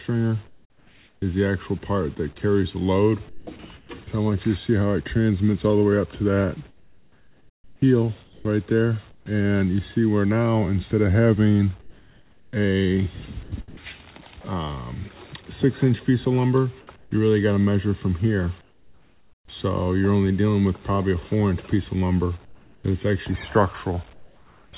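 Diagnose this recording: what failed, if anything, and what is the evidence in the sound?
Call processing: from 0.47 to 13.83 s the sound is chopped by the voice detector. About 3.45 s in total flips to synthetic comfort noise, likely from the sender's voice gating.

Call processing again, over a band-limited path with nothing above 4 kHz: from 16.96 to 24.73 s there's comfort noise in place of the background. Roughly 2 s of flat, featureless hiss replaces the real ambience, likely from discontinuous transmission.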